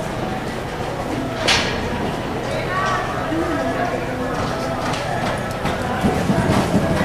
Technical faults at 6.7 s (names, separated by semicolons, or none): none